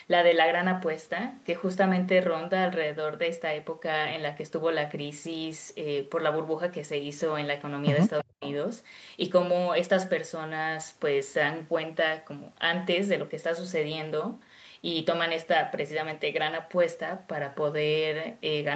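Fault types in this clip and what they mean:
speech suppressed in double talk: From 8.22 to 8.45 s the speech level suddenly collapses. At its deepest it falls by around 40 dB, and the total affected time is about a fifth of a second. This is likely an echo canceller that heard both sides talking at once. It could not separate its own talker from the loudspeaker return, so it turned everything down. On a waveform the envelope pinches to almost flat. On a spectrogram the harmonics and formant bands fade into a dark gap across the whole band.
echo leak: Right after the dip, from 8.44 to 8.52 s, a faint delayed copy of the voice comes through. It trails the original by 320 ms and is very quiet, roughly 25 dB below the speech. The likely cause is a loudspeaker on one side of the call whose echo canceller let part of its microphone pickup slip back into the call. On a waveform it shows as a small, low-amplitude blip. 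A spectrogram shows a weak repeat of the earlier harmonic pattern, shifted 320 ms later.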